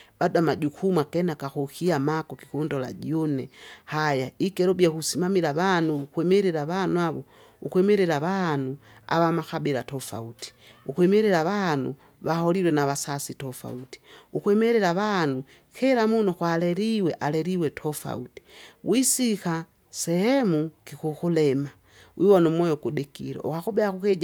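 No technical faults are audible.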